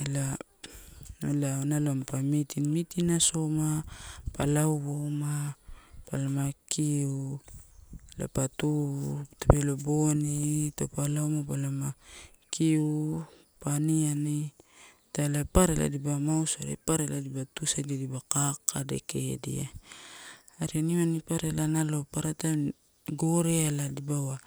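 From 4.94 to 5.48 s, after "meeting asoma pa", speed and pitch jump together by 5.4% and 91 cents, then snap back, likely a drift correction step.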